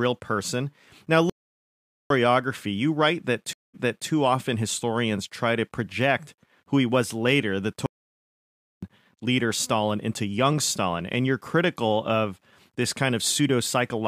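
Speech that drops out twice in mid-flow: from 1.30 to 2.10 s, about 0.81 s of silence, and from 7.86 to 8.83 s, about 0.97 s. Each time the sound picks up again after the pause. These are most likely playback stalls, where the player's buffer ran dry or its output thread was held up, so it simply paused until data flowed again. Between 3.53 and 4.08 s there is a different break, a stream reconnect. After a short gap of 205 ms, the audio resumes 348 ms earlier than where it was cut, so a fragment is heard twice, and the restart comes in muted or faded as a freshly started decoder settles. That backward jump and soft re-entry set it apart from the two stalls, which leave a longer silence but do not jump back.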